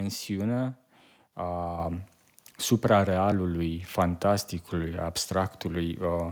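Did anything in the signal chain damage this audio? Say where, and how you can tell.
Yes. At 1.33 s the sound skips about 7 ms with the edges butted together and no silence. That is likely audio missing between chunks at a buffer boundary in the driver, not a network dropout.

At 1.80 s the microphone volume steps up by about 5 dB in one jump, voice and background together. It is call processing, not a codec, because the level holds afterward rather than ramping.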